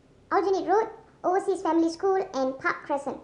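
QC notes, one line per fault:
Throughout, wrong sample rate: audio plays about 1.38 times too fast and roughly 5.5 semitones high, which fits 32 kHz material played back at 44.1 kHz.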